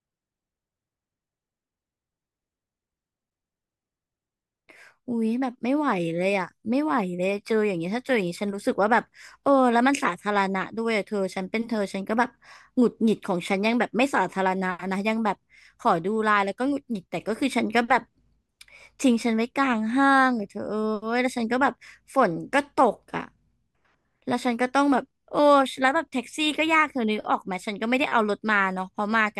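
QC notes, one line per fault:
No faults found in this speech recording.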